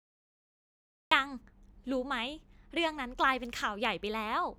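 For the first 1.11 seconds there is only digital silence. At 1.11 s the speech bursts in abruptly, already mid-sound. This is a cut-off start. The capture or stream began late, so the talker was already speaking when the audio began. The opening of that sound is missing. There is no natural attack and no fade-in. The level jumps straight from nothing to full speech, which sounds clipped off at the front.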